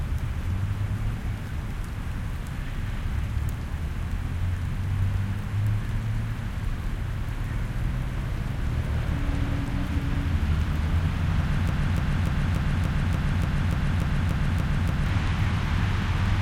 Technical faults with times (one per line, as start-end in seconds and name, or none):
11.69-15.06 broken-record loop